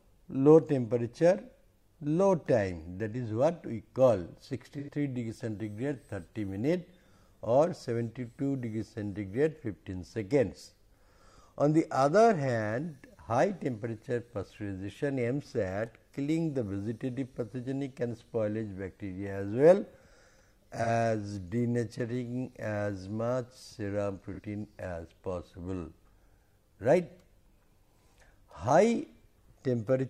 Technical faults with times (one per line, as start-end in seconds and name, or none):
4.79-4.90 AAC frame loss with concealment
20.83-20.89 AAC frame loss with concealment
24.33-24.40 AAC frame loss with concealment